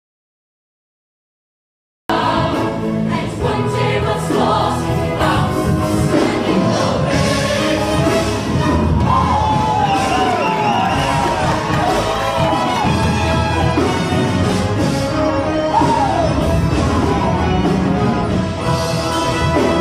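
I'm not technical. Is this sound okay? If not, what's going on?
No. For the first 2.1 seconds there is an audio dropout to silence: the clip opens in dead silence, and the sound cuts in abruptly at 2.1 s. Unlike a natural pause, there's no background hiss or room tone. The input was likely lost, so that stretch is gone.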